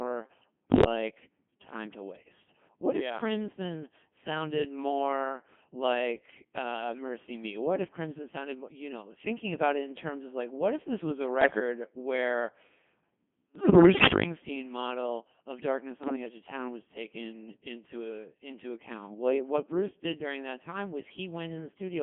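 Throughout, the speech carries the heavy damage of a Codec 2 vocoder, confined to about 150 Hz to 3.4 kHz. The voice is rebuilt from sine waves carrying only pitch, voicing and envelope, which points to a mode near 2.4 kbit/s. That gives a steady robotic buzz rather than the smeared, watery artefacts of a waveform codec.

Bit errors on digital voice radio break in at 0.69 to 0.86 s, at 11.42 to 11.60 s after "if this was a", at 13.56 to 14.24 s before "model of darkness", and at 16.04 to 16.16 s between "model of darkness" and "edge of town was". Corrupted parameters make the voice lurch in pitch and level and turn into bleeps and warbling gibberish, never silent gaps like packet loss.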